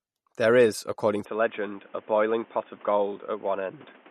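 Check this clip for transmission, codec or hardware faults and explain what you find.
Two faults are audible in this speech clip.

MP3 compression runs throughout. Nothing is present above 13.3 kHz, and the codec damage is plainly audible. The likely cause is an MP3 encoder starved of bits, which fits a low bitrate around 48 kbps. It cuts the treble and drops weak frequency lines frame by frame, giving a watery, swirly texture.

An input switched to a poorer device at 1.25 s and stays that way to the end. From there, nothing passes above 3.6 kHz, so the speech turns dull and boxy. There is no silence at the switch and no clear level jump. A new noise floor appears well below the speech. A likely cause is a change to another microphone or a headset's call profile.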